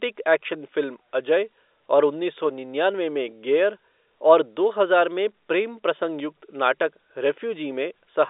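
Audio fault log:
No faults are heard in the speech. It has the narrow sound of G.711 telephone coding, with the line band running from about 300 Hz to 3.7 kHz, nothing above 3.8 kHz, and at most a faint quantisation noise that follows the level of the speech.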